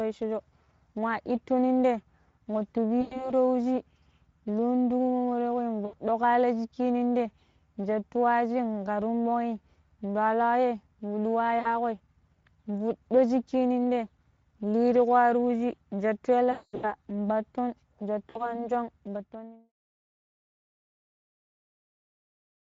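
The whole thing runs through the Speex codec at a setting that sounds like roughly 16.8 kbps, so the speech comes out plainly hoarse and grainy, with a thin, noisy fill up top instead of real high-frequency detail.

Then there's VoIP packet loss concealed by the speech codec at 3.01 to 3.31 s, 5.85 to 5.95 s, 11.59 to 11.68 s, 16.51 to 16.96 s and 18.29 to 18.65 s. The decoder stretches the last bit of sound into a fading buzz, and the worst patch is around 16.5 s, with a 220 ms run. After that comes the fade-out, from about 19 s to 19.73 s.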